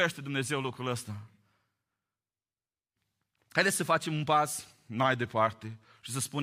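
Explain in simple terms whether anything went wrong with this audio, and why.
From 5.03 to 6.06 s the speech suddenly slows by about 5.5% and drops roughly a semitone in pitch, then snaps back to normal. This is a drift correction step, likely from software briefly changing playback speed to keep two device clocks in sync.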